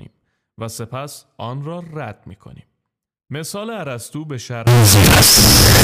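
From 4.67 s to the end, the speech turns into a loud, harsh, near-square buzz with noise as loud as the voice. This is likely float read as integer: 32-bit float samples interpreted as 32-bit integers.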